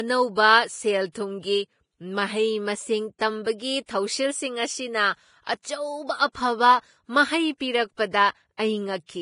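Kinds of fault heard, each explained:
Vorbis compression: Heavy lossy coding at a low bitrate, likely Vorbis at around 29 kbps, quantises the treble coarsely and removes everything above 10.5 kHz. The speech comes out dull on top, with grainy, hissy detail and roughened, smeared consonants throughout.
Pre-echo: The codec spreads its quantisation noise across a whole transform block, so noise meant for a sharp onset leaks into the quiet moment just before it. Short hisses of about 14 to 32 ms precede attacks at 0.35, 1.12, 5.44, 8.11 and 8.57 s, blurring them.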